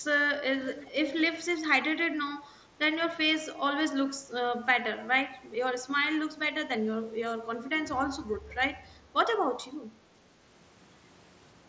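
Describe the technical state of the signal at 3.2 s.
A brief, nearly hidden smear at 3.16 s, about 7.5 ms long: concealed Bluetooth headset packet loss, where the receiver patched a single lost packet by repeating recent waveform.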